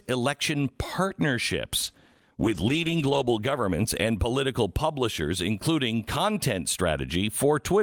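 A call bitrate drop runs from 1.87 to 4.25 s, ending just before "publishers including content". The sound points to the encoder falling from around 48 kbps to roughly 13 kbps for about a second, coding coarsely and trimming high frequencies, so the speech turns rough and muffled until recovery.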